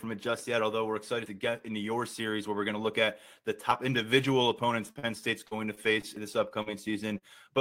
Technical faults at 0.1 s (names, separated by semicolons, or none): none